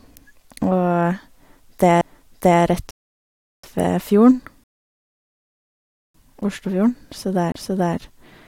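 At 2.01 s there is a CD skip. The speech breaks with a small tick. The player mutes for just a few milliseconds. Then it resumes from a different point on the disc. A knock or a flaw has thrown the laser onto another turn of the spiral. The result is an abrupt jump in the speech, not a pause.

From 2.91 to 3.64 s comes a rebuffering stall. The audio drops to silence for 0.73 s. It picks up exactly where it left off, just before "ved fjorden". The player ran out of downloaded audio and waited for more. Nothing is lost. The gap only stretches the timeline.

A second, longer rebuffering stall runs from 4.64 to 6.15 s, right after "ved fjorden". The silence lasts 1.51 s. The speech then continues seamlessly from the same point.

At 7.52 to 7.54 s there is another CD skip. It brings a tick and a mute of about 20 ms. The laser lands on a different turn, and the speech jumps ahead or back.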